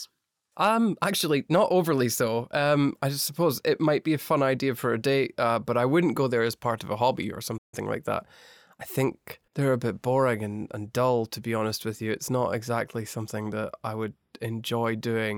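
At 7.57 s, after "of a hobby or", a playback stall silences the speech for about 150 ms. It resumes at "like that I think", likely after the player ran dry.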